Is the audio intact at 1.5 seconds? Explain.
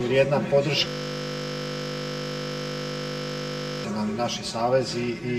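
No. At 1.5 s the clip is inside a system hang loop that runs from 0.88 s to 3.84 s. The machine or its driver stalled while the audio hardware kept replaying the same ring buffer, so one 20 ms slice repeats exactly, roughly 150 times in a row. Because the slice is so short, the repetition fuses into a steady buzz at 50 Hz rather than a stutter, and new material stops until the loop releases.

The channel delay (comb filtering) present throughout the clip is also present at 1.5 s. One channel trails the other by around 5 ms, and when the two are summed to mono, the shared content cancels at evenly spaced frequencies starting near 100 Hz. The resulting fixed notches give the audio a hollow, phasey colour. That colouration is also heard through the looped slice.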